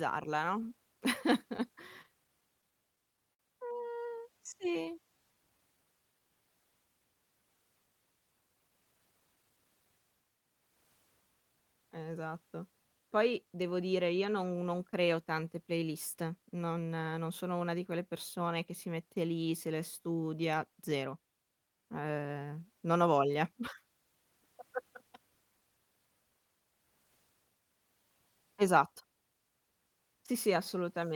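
From 1.57 to 3.41 s the speech carries scattered short gaps: around ten lost or late packets, each patched by extending the preceding sound, with the longest hole about 50 ms and roughly 150 ms filled in all, about 7% of the stretch. Each patch gives a brief tick, smear or hiccup. On a spectrogram they show as short smeared or frozen harmonic slivers; the waveform shows small repeated or flattened segments.

Between 4.06 and 6.2 s comes a jitter buffer slow-down. The receiver's reserve had run low, so it rebuilt it by repeating single pitch periods and snippets of pauses, adding 123 ms and running at about 95% speed with unchanged pitch. Sounds are drawn out. A spectrogram shows stretched formant and harmonic tracks, and the waveform shows identical pitch cycles repeated back to back.

From 8.41 to 9.58 s there is a jitter buffer speed-up. Too much audio had piled up in the buffer, so the receiver trimmed short pieces of one or a few pitch periods, removing roughly 150 ms and running near 113% speed at the original pitch. 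The speech sounds hurried. On a spectrogram the harmonic tracks look compressed in time, and the waveform shows periodic cycles missing at splice points.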